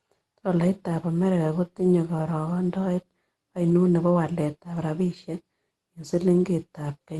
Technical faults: none

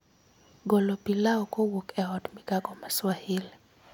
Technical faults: none

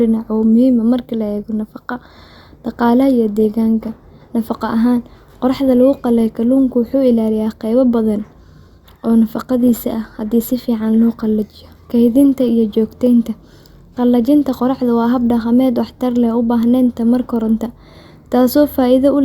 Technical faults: none

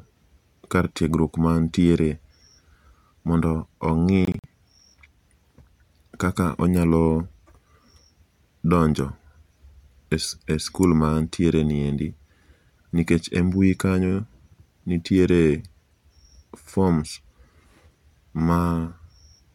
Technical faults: Bluetooth dropout

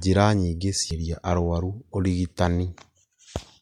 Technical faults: damaged data in a compressed stream

